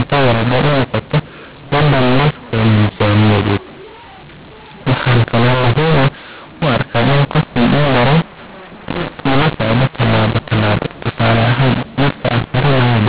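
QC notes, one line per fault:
Throughout, mu-law and A-law mixed up: the telephone audio was written with the mu-law curve but read back as A-law, so each 8-bit code maps to the wrong level. The speech comes out harsh and distorted, and the pauses are filled with noise because the quietest samples are lifted well above silence.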